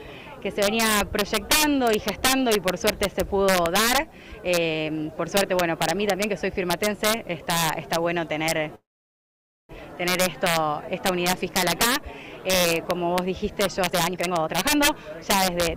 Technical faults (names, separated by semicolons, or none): integer overflow; call audio freeze; jitter buffer speed-up